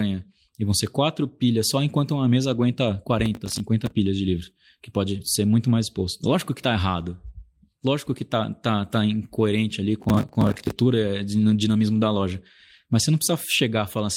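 From 3.26 to 3.92 s, just before "de livros", the processor falls behind and misses a run of audio buffer deadlines, each gap filled by replaying stale audio with hard edges. The spacing points to buffers of roughly 10 ms, with something like fifteen missed in a row. The result is processor overload crackle, a gritty tearing laid over the speech that stops once the load clears.

At 6.23 to 6.29 s, just before "que tá errado", packets are lost in transit. The following packets carry low-bitrate Opus in-band forward error correction copies, and the decoder plays those, so about 40 ms is lost packet rebuilt from error correction. There is no gap, but the passage sounds rougher and noisier, which fits two lost packets.

From 10.0 to 10.79 s, right after "tá tá incoerente ali", the processor overload crackle returns and runs longer. Again, missed deadlines leave repeated fragments of old audio, this time around thirty buffers of roughly 10 ms each, heard as a sustained burst of harsh crackle.

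From 11.95 to 12.05 s, a second lost packet rebuilt from error correction covers about 60 ms. The decoder fills it from the lower-quality redundant copies, so the sound turns briefly grainy and coarse rather than dropping out, consistent with three separate packets recovered this way.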